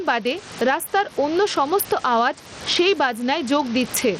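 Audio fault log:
Throughout, gain pumping: the room noise sits about 28 dB below the speech. The level swings by roughly 15 dB, squashing loud and soft passages together. The likely cause is input gain set far too high, with a fast limiter clamping each peak.
Throughout, Bluetooth SBC compression: the treble flickers and drops in and out, a gritty, grainy noise rides on the speech, and nothing reaches above 17.3 kHz. This is likely SBC starving its upper sub-bands of bits and coarsely quantising the rest, which fits a bitrate near 80 kbps.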